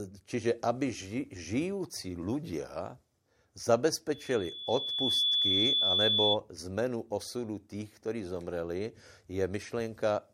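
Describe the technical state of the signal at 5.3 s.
At 5.3 s the speech is under a loudspeaker feedback squeal. It runs from 4.12 s to 6.38 s. A microphone is picking up the loudspeaker it feeds. At 3.4 kHz the loop gain goes above one, so that tone keeps feeding itself. It swells over about a second into a steady, piercing whistle. By 5.3 s it sits a little louder than the speech. It stops at 6.38 s.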